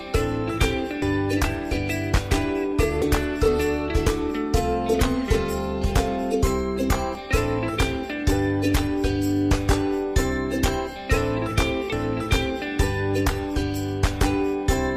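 Samples were likely not collected before the hardware overwrote them, a dropped buffer (overrun), so the audio jumps ahead with no gap at 1.02, 2.14, 3.02 and 7.15 s, losing around 150 ms at the first and third and around 50 ms at the others.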